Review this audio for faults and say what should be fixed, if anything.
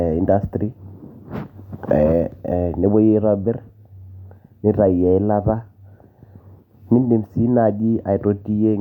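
Nothing here needs fixing; I listened through the whole speech clip and didn't catch any technical fault worth flagging.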